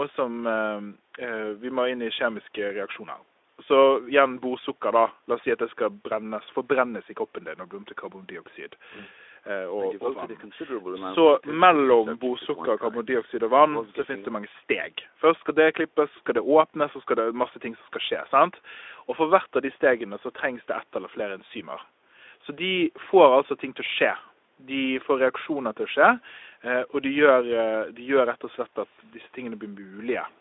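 No technical faults can be heard in the speech. It has passed through a call's microphone processing and the Speex codec, so nothing reaches above 8 kHz, the main band sits between about 300 Hz and 3.6 kHz, and there is only a light codec colouring.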